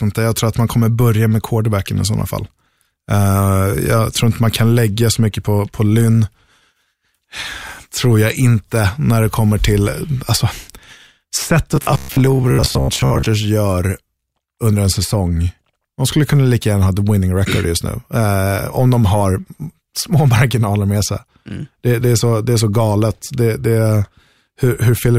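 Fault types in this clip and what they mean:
Robotic sound from repeated short buffers: new audio likely arrived too seldom, so playback filled the gaps by looping chunks of about 15 ms, replacing roughly half the real speech and laying a rigid, metallic 66.8 Hz buzz over it from 11.76 to 13.29 s.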